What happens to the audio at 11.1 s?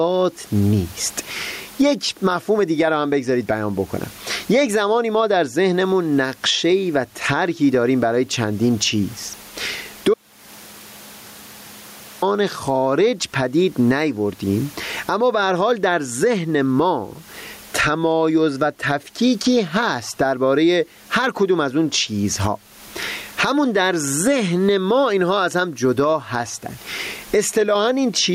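At 11.1 s the sound is inside an audio dropout to silence running from 10.14 to 12.22 s, roughly 2.1 s lost. The input was likely cut off while zeros kept being written, so even the room noise vanishes. A gain-pumping dip would leave that background audible.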